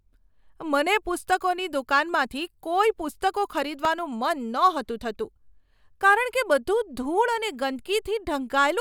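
A disc blemish destroying more data than error correction could rebuild on each rotation caused CD scratch ticks in this speech clip: four brief ticks, each about a millisecond or less, between 3.72 and 4.12 s.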